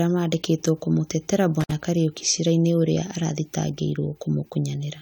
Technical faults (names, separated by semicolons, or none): intermittent contact